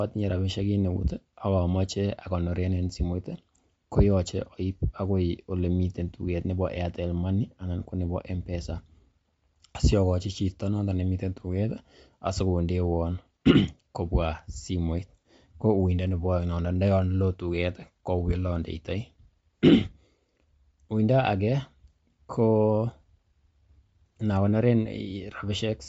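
Bluetooth LC3 compression throughout this speech clip: nothing above 7.7 kHz, with a plainly audible grainy, breathy edge, likely from LC3 coding at around 32 kbps.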